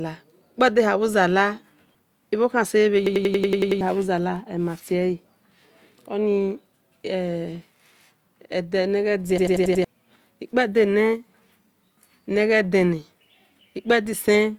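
From 3.07 to 3.81 s the speech breaks into a rapid machine-gun stutter: one 93 ms scrap repeats eight times at about 10.8 per second before "bhu zala" resumes, with roughly 0.7 s of speech missing. At 9.38 to 9.85 s the same stutter returns for five repeats, losing about half a second. This is a system hang loop: the system stalled while the audio hardware kept replaying its ring buffer, whose length fits a 4096-sample buffer.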